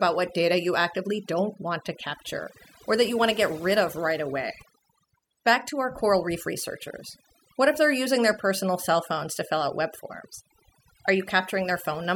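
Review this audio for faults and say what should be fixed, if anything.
Overdone noise removal runs through the whole speech clip. The denoiser was pushed so hard that any frequency band near its noise estimate gets pulled way down or gated out, taking quieter parts of the voice with it. Gaps drop to near silence with little twinkly specks. Next time, back off the reduction amount and let a bit of natural background stay rather than chasing total silence.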